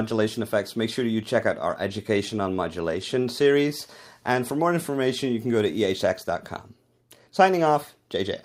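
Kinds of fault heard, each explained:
No faults detected; nothing to list.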